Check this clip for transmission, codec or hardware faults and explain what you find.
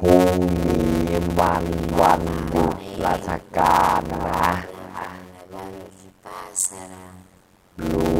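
Two faults run through the whole clip. Echo with no canceller: the far end's loudspeaker feeds its microphone. The speech returns roughly 300 ms later, about 11 dB quieter and thinner.

Block size mismatch (padded): short blocks are zero-filled to a longer read, which fits 256-sample writes. The gaps buzz at 91.9 Hz. Speech runs at 0.533 speed, near normal pitch.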